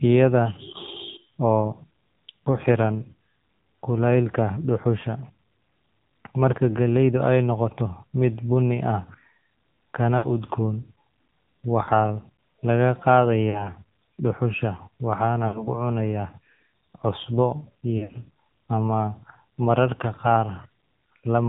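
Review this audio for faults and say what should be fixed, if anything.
The whole clip has the AMR narrowband mobile codec sound, with nothing above 4 kHz and a plainly buzzy, synthetic edge that fits a low mode around 7.4 kbps.

Lost AMR speech frames show up at 10.18–10.27, 11.84–11.90, 13.50–13.71, 15.48–15.68 and 17.98–18.18 s. The decoder stretches the last good sound and fades it, leaving dips of about 40 to 60 ms; the last one is scattered across about 160 ms.

To prevent both, carry the call over a cleaner radio link with a higher-rate or wideband codec.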